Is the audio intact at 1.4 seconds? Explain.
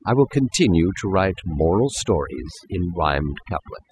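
No. At 1.4 seconds the speech is affected by overdone noise removal, which runs through the whole clip rather than appearing as a single event. A noise reducer set far too aggressively is pulling individual frequency bands down or out whenever they sit close to its noise estimate, and the quieter components of the voice are removed along with the noise. The background drops and breaks up into twinkling, warbling artefacts.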